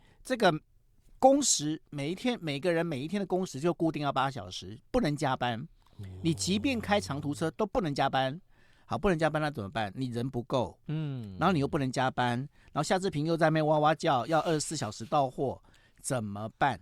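No technical faults are audible anywhere in the speech.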